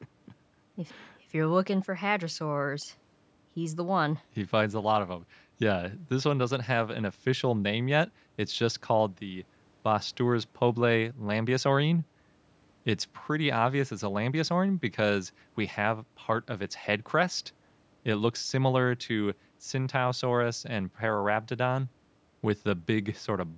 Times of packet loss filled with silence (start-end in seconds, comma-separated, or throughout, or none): none